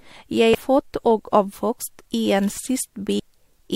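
Damaged data in the compressed stream corrupts frames at 0.54 s and again at 3.18 s, so the decoder misreads them and has to resync on the next valid frame header. Each time, the speech is broken by a brief chirp or blip.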